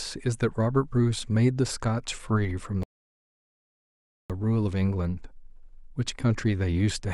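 At 2.83 s the speech hits a rebuffering stall: the player ran dry of downloaded audio and just waited. You get silence until 4.30 s, then it picks up exactly where it stopped. Nothing's missing, but about 1.46 s gets added.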